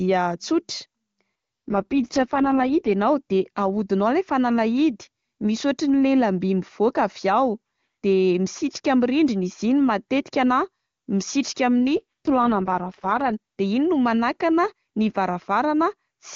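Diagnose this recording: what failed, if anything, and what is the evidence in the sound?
AMR rate drop, from 1.68 to 2.93 s and again from 11.96 to 13.32 s. At the network and codec stage, the speech briefly turns rough, raspy and synthetic, then clears. The bandwidth stays full and there is no gap, which rules out a dropout. That fits the link forcing AMR-WB from its clean top rate down to its lowest mode, about 6.6 kbit/s, spending bits on error protection before recovering.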